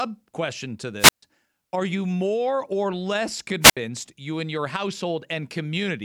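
Two wireless microphone squelch dropouts break the speech. At 0.99 s to 1.23 s, hiss rises, then the output mutes for 138 ms. At 3.61 s to 3.77 s, the same happens with a 70 ms mute. The radio signal fades and the receiver's squelch cuts the audio.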